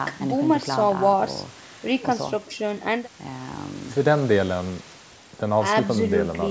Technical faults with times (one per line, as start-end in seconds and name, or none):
none